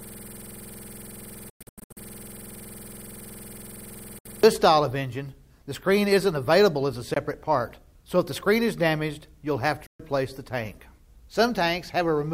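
System hang loop from 0.00 to 4.43 s, already running when the audio begins: a 46.44 ms slice repeats 94 times, a 21.5 Hz buzzing stutter, which fits a stalled 2048-sample ring buffer. Bluetooth dropout, likely the cause of abrupt silent gaps where the sound resumes further on: 1.50 to 1.97 s (broken holes, longest 106.7 ms), 4.19 s (64 ms), 7.14 s (21 ms) and 9.86 s (128 ms).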